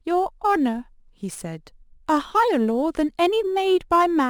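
From the start of the clip to the end, there's crude rate conversion on the speech. It sounds like the rate was changed by simply picking the nearest sample rather than filtering, and the pattern fits a jump from 48 kHz down to 44.1 kHz. The skipped samples leave an error roughly 30 dB below the speech that repeats with the ratio between the rates. You hear it as a gritty, inharmonic fizz riding on the louder and brighter parts of the speech.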